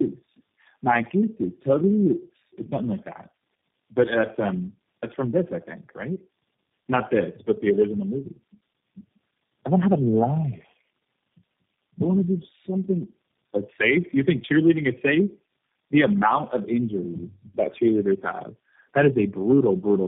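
Tandem speech coding runs throughout: the call was decoded and re-encoded at successive links, and the damage suggests about four low-rate speech coders in a row, consistent with AMR-NB and G.729A stages. Each stage compounds the last, leaving speech rough, muffled and warbly, with nothing above 3.5 kHz.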